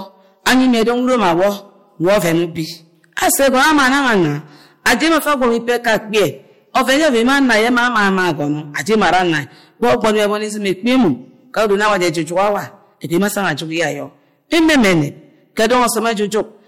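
Hard clipping runs through the whole of this speech recording: the signal is driven about 16 dB past what the converter or gain stage can pass, so a large share of samples, roughly one in seven, is cut flat at that stage's limit. Those squared-off peaks add harsh high harmonics, heard as a constant fuzz on every loud syllable.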